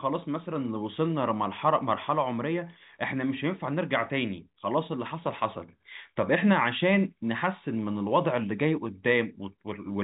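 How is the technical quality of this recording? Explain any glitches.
No glitches; the speech has no audible faults.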